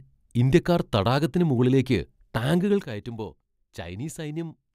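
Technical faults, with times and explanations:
2.84 s to the end, sudden gain jump: at 2.84 s the speech and its background noise drop together by about 12 dB in a single step, with no fade, and stay at that lower level to the end. This is likely a gain setting applied instantly rather than ramped. On the waveform the envelope narrows abruptly at one sample. On a spectrogram every frequency band, including the noise floor, darkens at the same vertical line.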